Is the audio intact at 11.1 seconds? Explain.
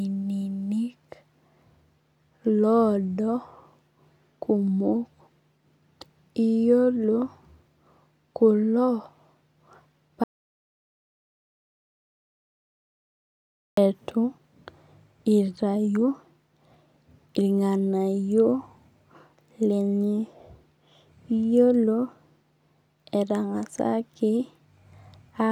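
No. At 11.1 seconds the clip is inside an audio dropout to silence that runs from 10.24 s to 13.77 s, about 3.5 s in all. The speech cuts off abruptly mid-flow and is replaced by silence, with no room tone or background noise underneath. The likely cause is a loss of the input signal, from a disconnected device, a failed link or an accidental mute, while recording carried on writing silence. Whatever was said during the gap is unrecoverable.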